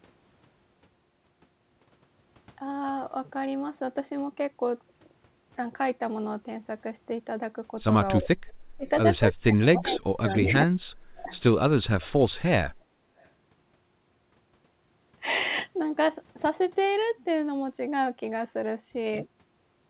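Speech suppressed in double talk from 8.2 to 8.87 s, 9.34 to 10.25 s, 10.41 to 10.72 s and 11.06 to 11.31 s: the voice dips by as much as about 35 dB, likely because the echo canceller mistook overlapping talk for loudspeaker echo and turned everything down.

Echo leak at 9.91 to 9.98 s, 10.29 to 10.36 s, 11.31 to 11.4 s and 13.19 to 13.27 s: brief scraps of the voice return 360 ms late, from about 10 dB down to about 40 dB below the speech. This is likely residual loudspeaker pickup that the far end's canceller let through. The narrowband G.711 call path, with nothing above 4 kHz, is audible as a limited top end.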